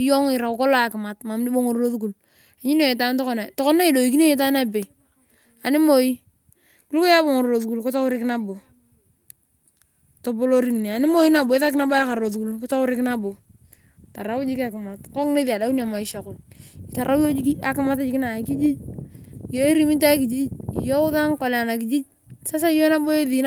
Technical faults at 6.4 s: none

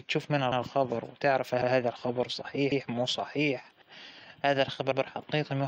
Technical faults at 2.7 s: overlapping chunks

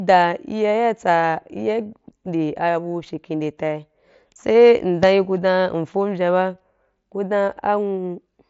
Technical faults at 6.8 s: none

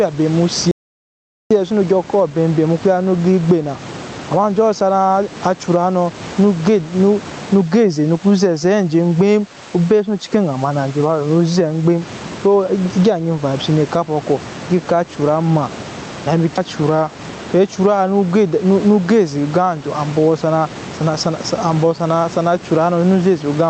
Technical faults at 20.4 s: gain pumping

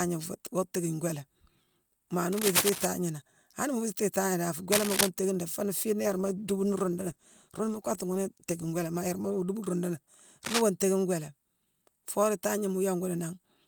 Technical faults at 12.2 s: none

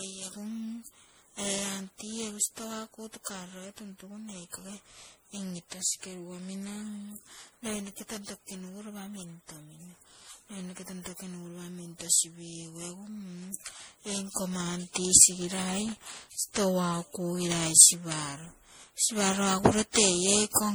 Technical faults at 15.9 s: generation loss; loose connector crackle

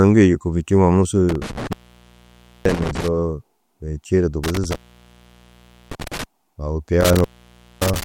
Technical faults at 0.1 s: none

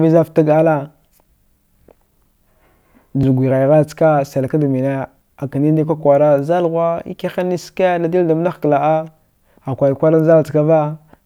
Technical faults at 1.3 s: audio missing between chunks

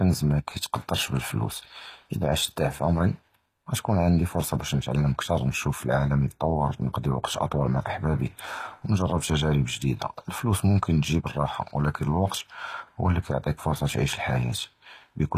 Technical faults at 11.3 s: HE-AAC compression

